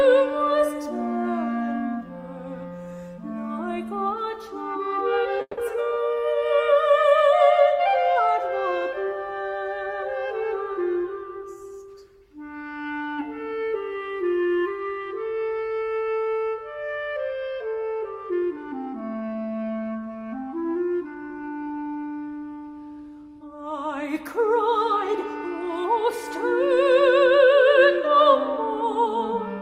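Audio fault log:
5.41–5.59 s, call audio freeze. The sound stops moving forward for 160 ms. The last moment is carried on as a fading buzz or hiss, and the final 40 ms are silent. Then the audio resumes exactly where it stopped, with nothing lost. The likely cause is delayed packets leaving the jitter buffer empty. The receiver filled the wait instead of skipping ahead. This inserts a gap and leaves everything after it 160 ms later.
18.42–19.36 s, jitter buffer speed-up. For just under a second the audio plays about 8% fast, at 108% of normal speed. The pitch does not rise. It simply sounds hurried. The buffer was holding more audio than its target, so the receiver cut many tiny pieces, each one or a few pitch periods long. Together they remove roughly a tenth of a second, which pulls the delay back down.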